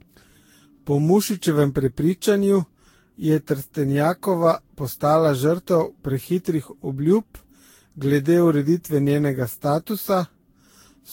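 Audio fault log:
Throughout, generation loss: the speech sounds swirly and hollow, consonant attacks are smeared, and nothing comes through above 16.6 kHz. This is likely from the audio being lossily re-encoded around ten times. The sound points to a Vorbis-style codec at roughly 60-something kbit/s. Every pass re-quantises on a shifted frame grid, so the noise and spectral gaps keep stacking up, which is why it sounds worse than that bitrate would on its own.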